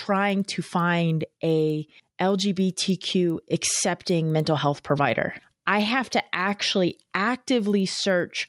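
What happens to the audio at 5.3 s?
At 5.3 s the speech carries the resampler restarted on every block fault, present throughout. Each 100 ms block is converted alone, which fits a 24 kHz to 48 kHz conversion, leaving an error at every block edge, heard as regular ticks at 10 Hz under the speech.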